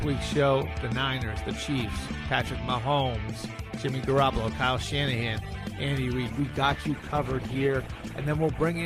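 At 6.31 s a call bitrate drop begins: the encoder is starved of bits, consistent with a fall from 48 to 13 kbps, so from there to the end the sound turns coarse and muffled.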